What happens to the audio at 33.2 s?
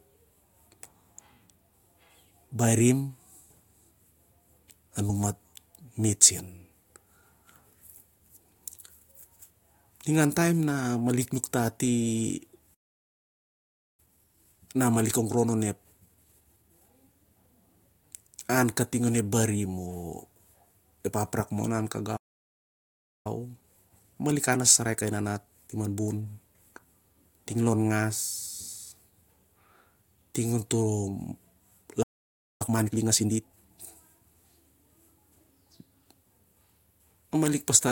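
At 33.2 s the player is in a time-compressed catch-up, running from 32.62 to 33.76 s. To clear its backlog after a stall, it trims small slices and cross-fades the remainder, playing at 1.5 times speed. The speech sounds hurried at normal pitch.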